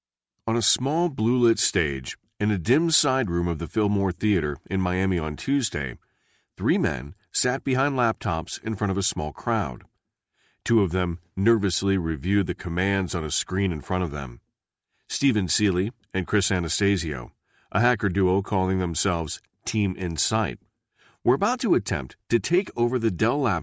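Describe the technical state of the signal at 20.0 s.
At 20.0 s the speech signal is intact, with no fault present at that moment.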